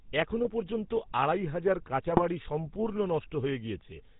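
GSM full-rate codec, throughout: the speech passes through the original GSM coder, which models the vocal tract and excites it with sparse, regularly spaced pulses, keeping every third excitation sample. Nothing above 4 kHz survives, and the voice carries a plainly audible buzzy, gravelly roughness, which fits a 13 kbps stream.

GSM bit errors, at 0.44 to 0.49 s and again at 2.10 to 2.21 s: corrupted bits reach the decoder, distorting filter, pitch or gain values so the spectrum bends or level jumps. The first burst is denser, the second spans roughly four frames, both breaking into squawks and gargling.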